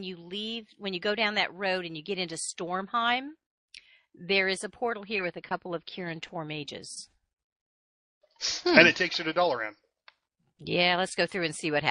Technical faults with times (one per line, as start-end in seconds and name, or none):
0.00-11.90 MP3 compression